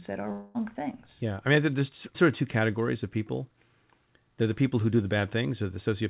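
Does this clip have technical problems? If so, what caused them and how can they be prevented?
Yes. From 0.32 to 0.56 s there is what sounds like a long network dropout. The receiver stretches the last sound into a fading buzz or hiss for about 0.22 s. It never falls to silence. The sound then resumes with that stretch lost. The likely cause is a burst of missing packets that the receiver had to conceal. A steadier connection, such as a wired link, or forward error correction on the call would prevent it.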